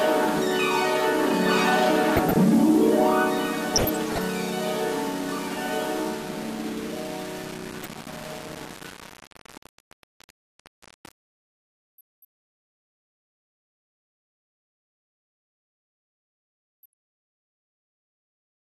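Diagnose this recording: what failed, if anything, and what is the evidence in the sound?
Low bit depth without dither runs through the whole recording, at the sample-format conversion stage. Quiet passages sound gritty and grainy, and the graininess shifts with the sound. The error is about 20 dB below the signal, which fits a word length of about 5 bits. The likely cause is rounding to that depth with no dither, so the error stays tied to the signal instead of being spread into noise.

MP2 compression damage is plainly audible throughout, at the codec stage. The top end is dull, and the remaining bands carry a gurgling, granular texture that flickers as upper sub-bands switch in and out. This fits MPEG Layer II at a rate around 80 kbps. That is too few bits to keep all 32 sub-bands alive, so the encoder has likely dropped the upper bands and quantised the rest coarsely.

DAB burbling occurs at 2.17–2.36 s, 3.74–4.34 s and 7.72–7.86 s, a network or transmission fault in reception. 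In these spans short blips of noise sit over the sound in single sub-bands. The middle burst is the longest and busiest. Bit errors have slipped past error correction into the MP2 data at a low rate, corrupting samples.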